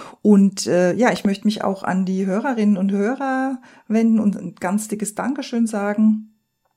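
At 1.16 to 1.27 s a loud pop cuts into the speech: two sharp transients in quick succession, peaking a few decibels above the speech, which continues underneath. The likely cause is a voltage spike from a plug, switch, static discharge or driver glitch.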